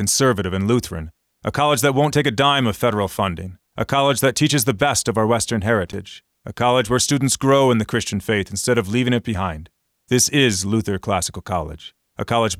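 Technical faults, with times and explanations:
5.87–5.95 s, loose connector crackle: just before "a college where students", a worn contact rapidly makes and breaks, chopping the speech into an irregular, scratchy burst lasting about 80 ms. Unlike a single clean digital click or dropout, it sounds ragged and uneven.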